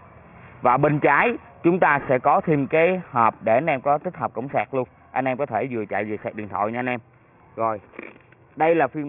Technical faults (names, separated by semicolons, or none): aliasing